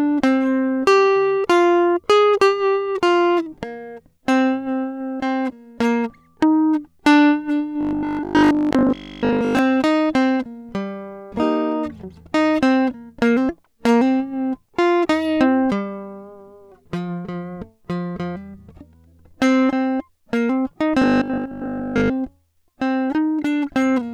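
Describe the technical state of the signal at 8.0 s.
Robotic sound from repeated short buffers runs from 7.81 to 9.59 s. New audio likely arrived too seldom, so a 20 ms slice was looped over most of this span while real material was skipped, stamping a rigid metallic buzz at 50 Hz onto the music.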